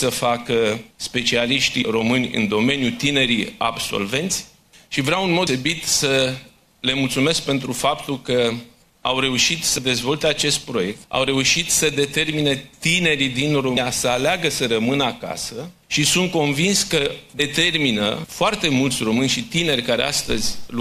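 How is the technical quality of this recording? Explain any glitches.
The recording is marred by five brief glitches. Damaged data in a compressed stream occurs at 1.81, 5.46, 9.77, 13.76 and 17.39 s. Corrupted bytes make the decoder misread frames and lose sync until the next frame header, producing a short glitch each time.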